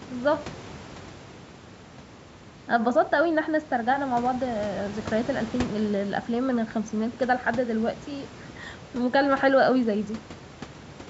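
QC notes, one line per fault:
No faults found.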